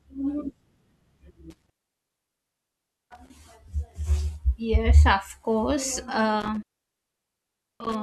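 Intermittent contact at 1.50 to 3.30 s and again at 6.40 to 7.95 s, just after "of course": a loose cable or plug briefly opens, dropping the speech for about 1.4 s and 1.2 s, with crackle at each edge and faint hiss underneath.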